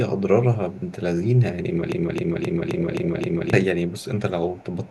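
A loudspeaker-side echo canceller in this speech recording likely let some of its microphone pickup through, producing an echo leak: a copy of the voice trailing by 289 ms at 0.15–0.21, 0.7–0.92, 2.76–3.21, 3.87–4.2 and 4.47–4.9 s, mostly faint but clearly audible around 2.76–3.21 s. A stalled player, encoder or stream likely kept resending its last fragment, causing a broken-record loop from 1.92 to 3.53 s, where a 263 ms piece repeats back to back six times and the audio that belonged there is lost.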